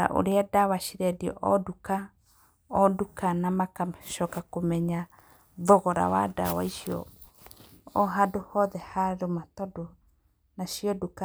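Sharp single clicks at 0.32 s, 4.75 s after "nduka na magacoka", and 8.8 s before "harũma tondũ" are likely dropped samples, with a fraction of a millisecond missing so the waveform jumps.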